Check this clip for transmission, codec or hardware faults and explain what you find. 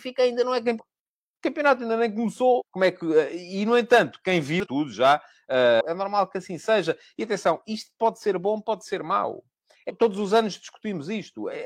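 The speech has five short bursts of damaged data in a compressed stream: at 0.75–0.80 s after "ainda não é", 2.56–2.62 s after "campeonato ainda nem", 4.60–4.67 s after "e no entanto quem", 5.76–5.82 s, and 9.85–9.91 s. Corrupted frames make the decoder lose sync and hunt for the next header, producing brief disruptions lasting roughly 60 ms.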